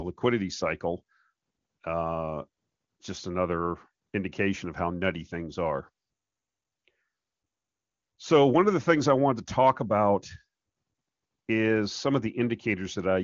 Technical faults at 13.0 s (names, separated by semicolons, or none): none